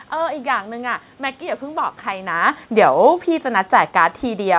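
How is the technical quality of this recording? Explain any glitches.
One fault affects this recording. The audio has nothing above 4 kHz, which fits a narrowband G.711 call path, and the room noise in the background is part of the original recording.

Automatic gain falling runs from 2.3 s to the end. The gain control judged the input too loud, or its background noise too strong, and gradually lowered its gain, so the speech and the room noise sink together. When the talker shifts position around 2.0 s, only the voice level changes and the background holds steady.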